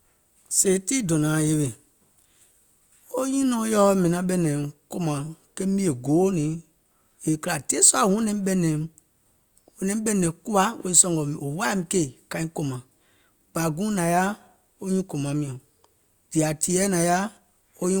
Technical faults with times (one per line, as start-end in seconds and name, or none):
none